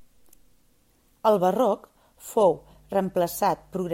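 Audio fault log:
2.38–3.94 s, mains hum: a steady 50 Hz tone enters and stays to the end. It sits well below the speech, leaked in from the power line.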